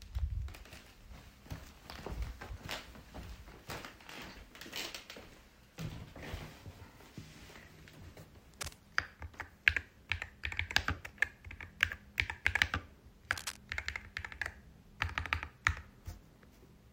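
Cable scratch noise appears from 8.54 to 8.73 s and again from 13.31 to 13.57 s, each a short burst of dense, ragged crackle laid over the sound and only slightly quieter than it. The likely cause is a worn cable, connector or control being moved, so that its contact resistance jumps about rapidly and injects uneven noise into the signal, heard as a brief scratching rustle each time.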